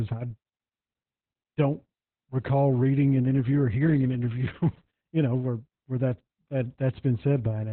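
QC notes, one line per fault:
Throughout: Opus voice compression. The speech is squeezed into a narrow band, with nothing above about 4.2 kHz. It sounds muffled and boxy, with sibilants dulled. The linear-prediction coder renders the voice from a coarse model of the vocal tract and a roughly coded excitation. That makes the tone hoarse and faintly robotic. The heavy damage fits a very low rate of around 8 kbps in narrowband SILK mode.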